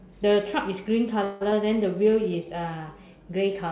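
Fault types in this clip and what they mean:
call audio freeze: At 1.24 s the sound stalls into a fading buzzy continuation for about 170 ms, then resumes where it stopped with nothing lost. The likely cause is packets arriving late, so the jitter buffer emptied and the receiver stretched the last sound.
skip ahead: At 1.51 s playback jumps forward with almost no gap, and about 70 ms of speech is simply gone, the two sides spliced nearly directly. A short stretch of audio was dropped in transit or discarded while later audio was already queued.
jitter buffer slow-down: From 1.74 to 2.46 s the speech runs at about 90% speed, pitch unchanged, with drawn-out sounds. The receiver repeated single pitch periods to add 78 ms and rebuild its buffer reserve.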